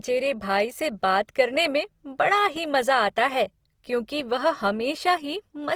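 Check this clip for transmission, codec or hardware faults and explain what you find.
There's one fault, and it runs the whole way through: the speech has a grainy, rough texture. That's most likely Opus compression in its music (CELT) mode, which keeps each band's energy but fills starved bands with folded or noise-like content. The damage is plainly audible, which points to a low bitrate around 24 kbps, though the band still reaches 20.3 kHz.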